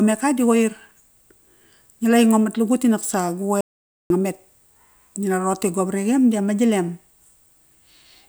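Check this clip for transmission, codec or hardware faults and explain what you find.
One fault is audible in this speech clip, a single break in the signal.

Audio dropout to silence, 3.61 to 4.10 s: the speech stops abruptly and is replaced by about half a second of silence, with no room tone or background underneath, before resuming mid-flow. The likely cause is a momentary loss of the input, such as a dropped link, a connection glitch or a brief mute, while the recorder went on writing silence. Whatever was spoken in that interval is lost.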